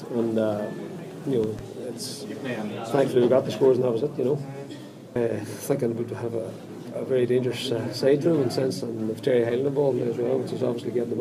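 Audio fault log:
1.44–1.62 s, loud pop: a voltage step, likely from a switch or static discharge, enters the signal, producing two sharp pops peaking a few dB over the continuing sound.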